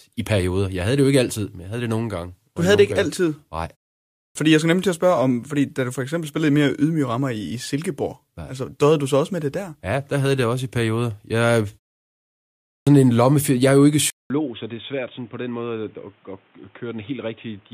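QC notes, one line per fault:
4.04 and 12.55 s, clipped start after a pause: the sound comes back abruptly after gaps of 0.36 and 0.84 s, with about 310 and 320 ms missing before "fordi jeg skal nemlig" and "en lomme". The output device was asleep through the pause and needed time to wake and lock before anything reached the speakers.
14.1 s to the end, input switched to a poorer device: after "er jo ikke" there's about 200 ms of silence, then the speech turns dull and boxy with nothing above 3.8 kHz, drops around 10 dB in level, and picks up a new noise floor roughly 35 dB down. That's most likely the recording jumping to a narrower-band microphone or a headset's call profile partway through.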